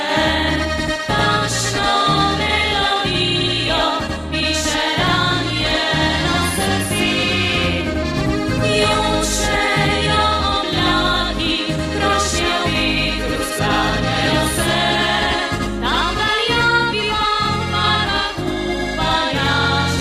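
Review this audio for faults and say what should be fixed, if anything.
Channel delay (doubling), throughout: one channel lags by 92.9 ms, which fits a 4096-sample buffer, so the mono sum carries an equal-level second copy, heard as doubling or slap echo. Align both channels' buffers before summing to mono so they reach the mix together.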